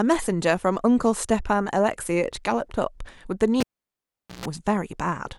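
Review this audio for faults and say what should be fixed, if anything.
At 3.60 to 4.46 s, the cable is pulled and plugged in: a pop, about 0.8 s of near silence, a 0.13 s burst of 60 Hz mains buzz as the plug seats, then another pop. Mute the channel before touching any live connection, and secure the cable so it can't get yanked mid-take.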